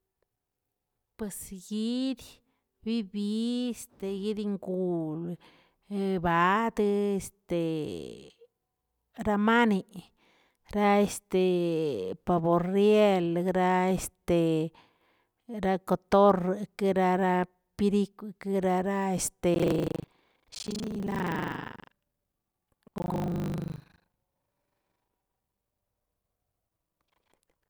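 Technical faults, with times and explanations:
19.52–27.70 s, buffer tearing: writer and reader of the ring buffer have slipped, so about half of each 40 ms period replays speech from roughly 150 ms earlier, giving a 25 Hz robotic rattle; waveform shows hard joins every 40 ms, spectrogram vertical stripes.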